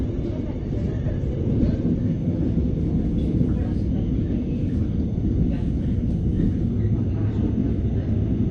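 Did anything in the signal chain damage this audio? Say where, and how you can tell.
Yes. The damage sits at the codec and delivery stage: an adaptive stream starting at a low bitrate. From 0.0 to 2.0 s nothing is present above 8.2 kHz and codec smearing is heavier, which fits a low Opus rate near 12 kbit/s. The audio then jumps to full bandwidth without a gap, consistent with a switch to about 64 kbit/s.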